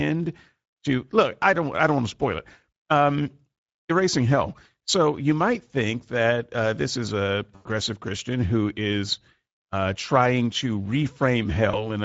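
Speex codec damage runs through the whole speech clip. The voice sounds hoarse and grainy, with plainly audible coding noise. The top band sounds like shaped hiss rather than real detail. That points to a middle Speex setting near 16.8 kbps, too few bits for a clean excitation.

VoIP packet loss concealed by the speech codec hits from 7.55 to 7.68 s, after "uh this is a" and before "christian who is uh". The decoder stretches the last sound out and lets it fade. That fits about five lost 20 ms frames. A smaller dropout follows from 11.71 to 11.90 s, fitting one lost frame. There the voice stays weak and smeared briefly while the decoder recovers.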